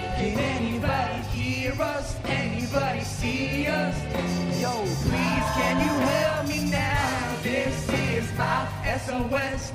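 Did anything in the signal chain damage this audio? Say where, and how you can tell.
Yes. Crude rate conversion starts at 5.03 s and runs to the end. A 48 kHz to 44.1 kHz sample-rate change was made by picking the nearest sample, with no filter. The periodic timing error adds a gritty, inharmonic fizz about 25 dB below the sound, tracking loud and bright passages.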